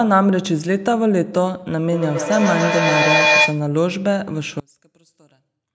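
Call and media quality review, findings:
Feedback howl, 1.92–3.70 s. Tone near 2 kHz rises to about 3 dB above speech, loop delay roughly 150 ms. Mic-to-loudspeaker loop gains level each pass. Spectrogram: bright horizontal line. Waveform: swelling envelope.

One channel inverted, 4.60 s to end. Mono sum drops about 29 dB, and centred speech nearly vanishes, leaving a faint residue. Likely cause: reversed polarity on one stereo leg. Spectrogram: abrupt broadband fade. Waveform: sudden collapse to near-flat trace.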